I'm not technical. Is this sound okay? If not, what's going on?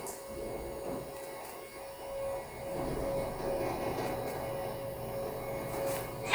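Yes, it's fine: I listened to the whole thing and nothing in it stood out as a problem.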